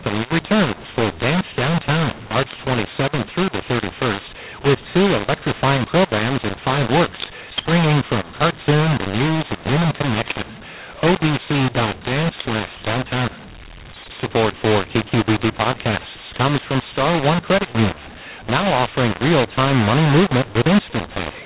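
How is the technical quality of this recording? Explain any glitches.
Poor. A mu-law and A-law mix-up affects the whole recording. The speech was coded with G.711 mu-law but decoded as A-law, so every sample level is misread. Some come out too loud, others too quiet, and near-silent samples jump well above zero. This gives harsh, gritty distortion, and noise fills the pauses. Unlike clipping, which only damages peaks, this damages quiet passages and gaps too. The telephone coding itself limits the sound to below 4 kHz.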